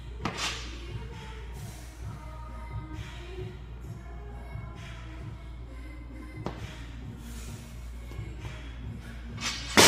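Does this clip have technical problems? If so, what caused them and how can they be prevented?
No, this clip has no technical problems, so there is nothing to prevent.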